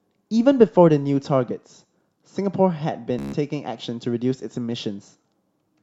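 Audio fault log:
3.19 to 3.34 s, Bluetooth stutter: The speech breaks into a short, rapid machine-gun buzz. Audio packets failed to reach the receiver on time. It kept replaying its last buffered slice while it waited, so one tiny fragment repeats over and over. About 145 ms of the original audio is lost, which fits roughly ten dropped packets. When data returns, the speech picks up further along, as if it had carried on underneath.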